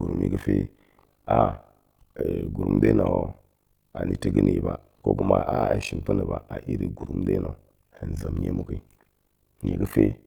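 From start to finish, the speech carries overlap-add ripple. The audio was split into windowed frames and rebuilt with an overlap whose windows fail to sum to a steady gain. So the level dips and swells once per frame, around 50 times a second. The swings are deep, about 60 dB from peak to trough. The result is a harsh, buzzing flutter over every syllable, like a rough robotic tremolo.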